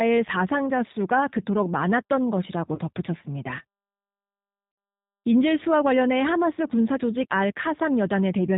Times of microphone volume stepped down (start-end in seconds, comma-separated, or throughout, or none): none